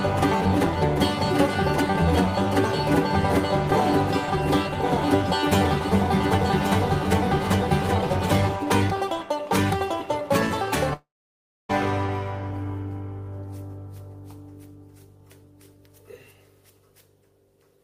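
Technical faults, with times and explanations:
0.00–8.56 s, doubled audio track: A second, full-band copy of the sound trails the original by about one second, some 5 dB quieter and without any room colour. It is already present when the clip begins and cuts off abruptly. The likely cause is a slower second capture path mixed in alongside the first.
10.93–11.71 s, long network dropout: The last sound smears into a brief fading buzz, then roughly 0.63 s of silence follows before the audio resumes. About 0.76 s of material never arrived, likely a network stall, and the receiver filled the gap with concealment rather than the lost sound.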